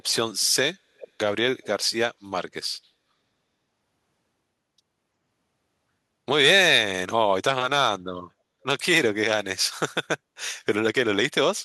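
At 0.98 to 1.08 s and again at 1.63 to 1.85 s there's an echo leak: a faint copy trailing about 359 ms behind, likely a loudspeaker echo the far end's canceller missed.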